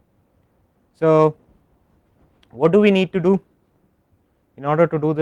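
Nothing in the audio stood out as a technical problem on listening.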